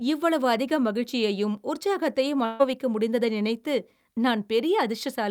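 A speech clip with a burst of packet loss from 2.45 to 2.61 s, just after "மகிழ்ச்சியையும் உற்சாகத்தையும்" and before "முடிந்ததை நினைத்து". About 140 ms of audio was lost or came too late, and the receiver filled the hole by stretching the last sound it had and fading it out, then jumped ahead. On a spectrogram the held sound runs flat and dim across that span before breaking off; the waveform shows a shrinking stretch, then an abrupt restart.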